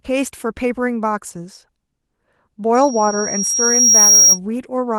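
From 2.74 to 4.39 s, loudspeaker feedback squeal: a 5.6 kHz tone swells over about a second and a half to roughly 10 dB above the speech, drawn as one bright horizontal line on a spectrogram.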